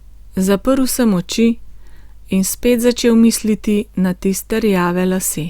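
No technical faults are audible.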